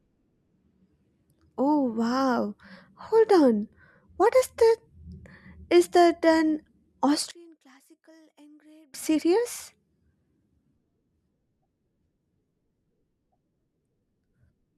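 Speech plays until 7.31 s. From there to 8.94 s the voice collapses, dropping by about 31 dB, and the centred sound and low end almost disappear. What remains is a faint trace. Full level returns at 8.94 s. The likely cause is one channel inverted: one stereo side had its polarity flipped for that stretch, so the shared centre content cancelled when the channels were combined to mono.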